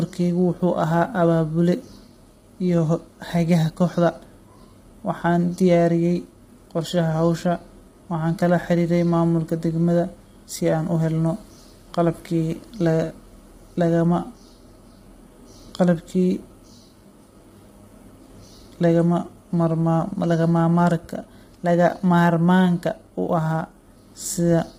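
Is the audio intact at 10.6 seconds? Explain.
No, the speech sounds rough and grainy at 10.6 s and throughout, with noise between harmonics and nothing above 15.9 kHz, likely low-delay AAC compression at a low bitrate, roughly 24 kbps.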